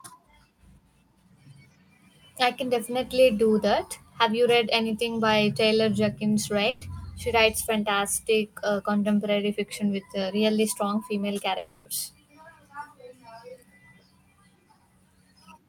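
At 6.69 s a burst of packet loss cuts into the speech for about 0.14 s. Roughly 120 ms of audio never arrived. The receiver stretched the last sound across the hole as a held buzz or hiss that sinks in level, and then the speech resumes further on with that stretch missing. On a spectrogram the spectrum freezes into flat horizontal lines that dim toward the right. The waveform shows a repeating, shrinking pattern before normal speech returns.

Just after "uh really strong female", at 11.57 s, a gap of about 0.3 s follows, likely a long network dropout. About 280 ms of audio is lost. The last sound is extended as a buzz or hiss that fades across the whole gap and never falls to silence, and the speech picks up again past the missing portion. A spectrogram shows smeared, static bands fading over the stretch. The waveform's envelope tapers steadily until the speech resumes abruptly.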